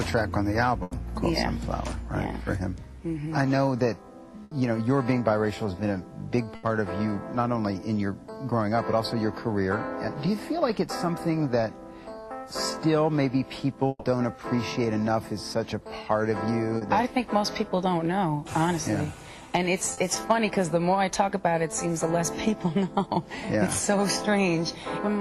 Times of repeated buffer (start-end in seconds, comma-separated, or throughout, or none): none